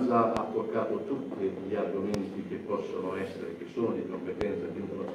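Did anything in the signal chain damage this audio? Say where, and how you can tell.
Yes. Loud pops at 0.37–0.39 s, 2.14–2.17 s and 4.41–4.44 s, each a single thump about 20 dB above the sound, most likely a voltage step in the analogue wiring. Unlike a dropout, the sound carries on beneath each pop rather than vanishing.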